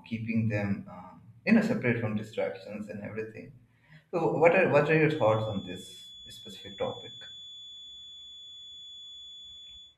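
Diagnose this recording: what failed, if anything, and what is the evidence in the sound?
The codec stage dropped compressed frames twice. At 1.49 s, just before "know separate from distractions", the audio jumps ahead by roughly 20 ms, and at 6.41 to 6.47 s it loses around 50 ms.

From 5.04 s, right after "are what are", a thin, steady feedback whistle at 3.4 kHz sits about 20 dB under the speech and runs to the end, swelling and fading slowly in level. That's likely a speaker-to-mic loop hovering just short of runaway.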